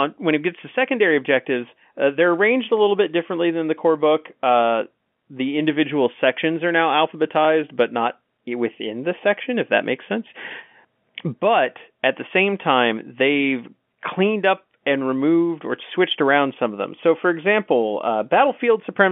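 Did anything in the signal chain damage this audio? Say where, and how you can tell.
No, nothing in the chain damaged this speech; it arrives as ordinary G.711 telephone coding, with the band limited to roughly 150 Hz to 3.4 kHz as a phone line would pass it, and only the faint, level-following quantisation hiss that the logarithmic 8-bit format, which fits a 64 kbps mu-law line, leaves under any signal.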